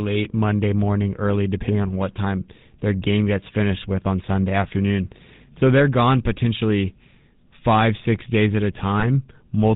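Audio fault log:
throughout, GSM full-rate codec: a plainly audible buzzy, gravelly roughness sits on the speech, with nothing above 4 kHz. The codec models the vocal tract and excites it with regularly spaced pulses, keeping only every third excitation sample, which fits a 13 kbps GSM full-rate stream.
9.0–9.05 s, lost GSM frames: just after "six days at a", the sound briefly holds with a rough, metallic ring. One 20 ms frame went missing, and the decoder filled the gap by repeating the last good frame's settings.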